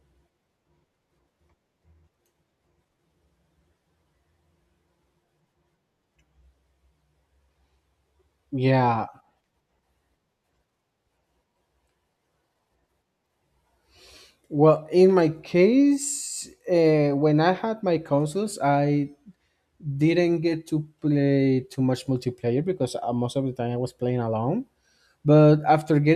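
There are no technical faults to describe in this speech recording.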